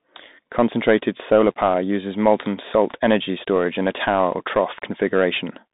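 Throughout, the speech sounds thin and boxed in, with nothing above 3.8 kHz, scratchy s sounds and a granular hiss underneath. This is the Bluetooth CVSD headset codec, coding one up-or-down bit per sample with an adaptive step, consistent with a 64 kbps link passing only 150 Hz to 3.7 kHz.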